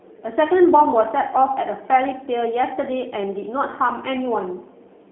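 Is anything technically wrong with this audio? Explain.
Yes. Throughout, G.729 codec damage is plainly audible. Speech is rebuilt from a filter and sparse pulses, fitting 8 kbit/s, and nothing passes above 3.8 kHz. It sounds rough and synthetic.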